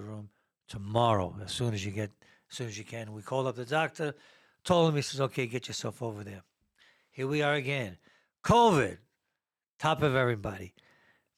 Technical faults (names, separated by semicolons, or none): none